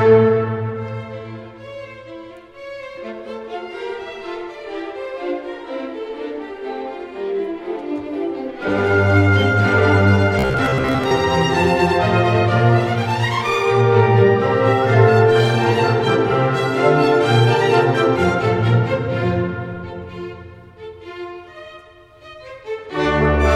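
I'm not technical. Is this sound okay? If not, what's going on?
No. From 10.39 to 11.11 s the sound turns into a rigid, metallic buzz, robotic sound from repeated short buffers. Fresh audio likely arrived too slowly during that stretch, so the playback software kept looping the last tiny slice, about 15 ms long, to fill the gap. That loop imposes a fixed hum near 67 Hz, and roughly half of the real sound in that window is skipped rather than heard.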